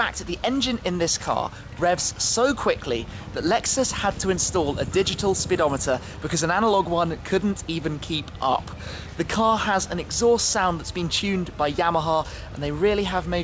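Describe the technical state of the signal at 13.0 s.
At 13.0 s the audio is intact, with no fault at that moment, and its content stops at 8 kHz as expected for the wideband call codec it passed through.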